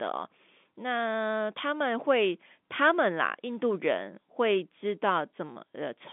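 No technical faults are audible.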